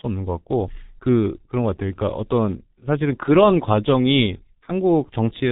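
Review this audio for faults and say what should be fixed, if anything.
G.723.1 codec damage runs through the whole speech clip. Nothing survives above 3.8 kHz, and the heavy coding leaves the voice muffled and hoarse, with consonants smeared because the codec refreshes its voice model only once per 30 ms frame. The degree of damage fits its 6.3 kbit/s mode. A simple low-pass filter or narrowband line would also stop near 4 kHz but keep consonants crisp below it; the hoarse, blurred texture marks a low-rate codec. To prevent this, record or transmit with a wideband codec at a higher bitrate instead of G.723.1.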